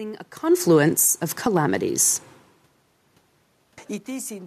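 Automatic gain falling from 0.55 to 1.16 s in this speech recording: the gain control judged the input too loud and pulled its gain down by about 6 dB, so voice and room noise sink together. Automatic gain rising follows, overlapping it, from 1.07 to 1.85 s: the control then finds the input too quiet and raises its gain by about 4 dB, swelling the speech and the room noise in step. The level shifts near half a second and four seconds come from the talker moving relative to the microphone.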